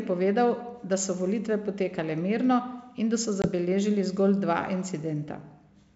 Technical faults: packet loss on an ADPCM call

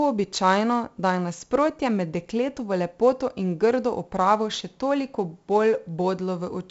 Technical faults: 4-bit ADPCM compression

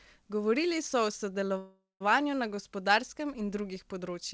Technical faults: call audio freeze

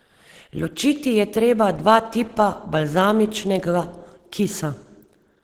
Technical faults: Opus compression

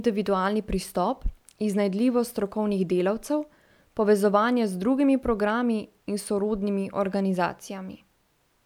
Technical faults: none

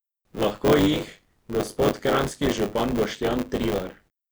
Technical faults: buffer tearing

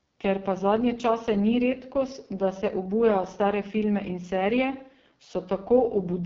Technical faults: AMR wideband (HD Voice) codec

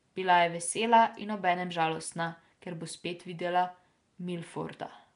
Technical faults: Nellymoser compression

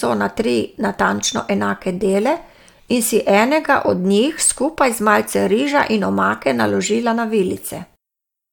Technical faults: none

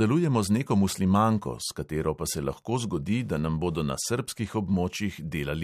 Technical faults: Wi-Fi interference

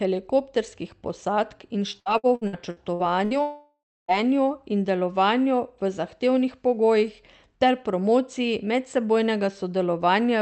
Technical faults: repeated packet loss (robotic sound); long network dropout

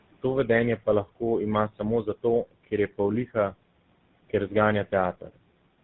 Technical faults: tandem speech coding

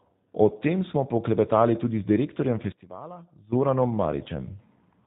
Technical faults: G.729 codec; one channel inverted; VoIP packet loss concealed by the speech codec

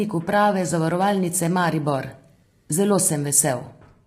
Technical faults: low-delay AAC compression

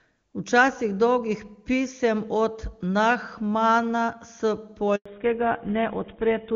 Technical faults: handover gap; fallback to narrowband

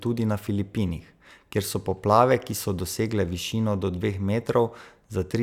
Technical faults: none

